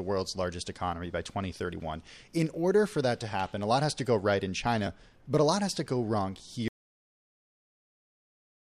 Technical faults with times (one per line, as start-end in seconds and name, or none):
6.68-8.71 audio dropout to silence